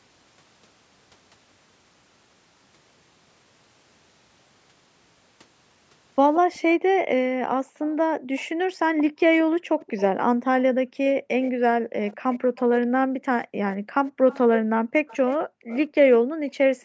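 From 6.34 to 6.59 s a faint second copy of the voice trails the speech by 178 ms, about 15 dB down. This is an echo leak, likely from a far-end loudspeaker whose echo canceller let some of its own playback return down the line.

From 6.75 s to the end, the room background repeatedly dips and vanishes, by as much as about 40 dB and around five seconds in all, then comes back. The echo canceller is gating the background, clamping the microphone hard whenever the loudspeaker plays.

The echo leak returns at 7.87 to 10.01 s with the same 178 ms lag. It recurs at 11.42 to 11.51 s, 12.09 to 12.6 s, 14.06 to 14.38 s and 15.07 to 15.78 s, now 220 ms behind. Each time it sits about 20 to 25 dB below the speech.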